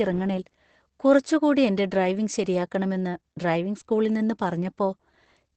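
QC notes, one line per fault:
throughout: Opus voice compression. Nothing is above 8.7 kHz. Coarse excitation coding makes the speech hoarse and slightly robotic, which fits SILK near 12 kbps.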